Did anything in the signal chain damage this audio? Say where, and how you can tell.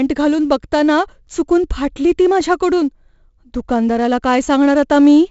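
Yes, at the codec. Heavy 4-bit ADPCM compression runs throughout. Coarse predicted steps leave gritty hiss riding the speech. Nothing lies above 7.7 kHz, which fits about 64 kbps.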